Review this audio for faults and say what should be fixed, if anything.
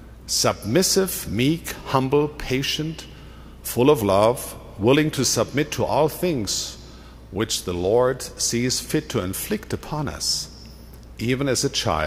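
I found no faults in this audio, so nothing needs to be fixed.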